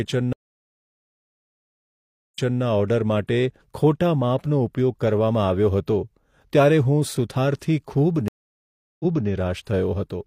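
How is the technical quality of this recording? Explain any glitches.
Two stream reconnects break up the speech. From 0.33 to 2.62 s, the audio drops out for about 2.01 s. From 8.28 to 9.28 s, it drops out for 0.72 s. Each time the connection broke and a fresh decoder restarted mid-stream. The speech resumes 0.28 s earlier, repeating a short stretch.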